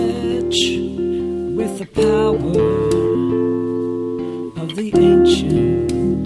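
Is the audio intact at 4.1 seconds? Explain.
Yes, at 4.1 seconds the audio is intact, with no audible fault at that point.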